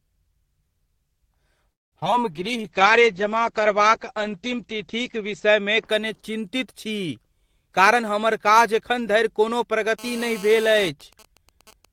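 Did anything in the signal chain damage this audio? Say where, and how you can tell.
Yes, the network and call processing did real damage here. At 1.71 s the speech stops dead for about 200 ms of silence and resumes at 1.94 s with nothing lost. That's a call audio freeze, likely packets stalling until the jitter buffer ran dry, adding roughly 0.2 s of delay.

Right after, there's short concealed packet loss at 2.00, 2.06 and 2.12 s. Each is 20 to 40 ms of the call that never reached the decoder, heard as quick smears with little or no fill, and each pulls back about 20 ms of delay.

From 2.30 to 5.92 s there's a call bitrate drop. The codec falls from 32 to 9 kbps and sits at the bottom for about 3 s. The top end closes from 20 kHz to 8 kHz, so the speech goes muffled and watery.

Between 2.44 and 3.14 s the jitter buffer slow-down kicks in. The receiver repeats pitch periods to rebuild its reserve, adding 62 ms and playing at 92% speed. 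The speech sounds drawn out while the pitch holds steady.

Later, 7.66 to 9.84 s, it's the reverse, a jitter buffer speed-up. Short pitch-period chunks get cut to shed roughly 0.2 s of backlog, so speech runs at 109% and sounds hurried without going higher in pitch.

Then the analogue wiring picks up interference. From 9.99 to 10.89 s there's GSM phone buzz, a harsh, harmonic-rich 217 Hz rasp about 18 dB below the speech. It comes from a nearby 2G handset in a call, with its transmit bursts being rectified by the audio circuit.

From 11.01 s to the end, a nearby 2G phone sends GSM signalling bursts while its user is silent. It's even ticks with a longer 217 Hz buzz twice a second, roughly 25 dB down. Same rectification, just sparser bursts.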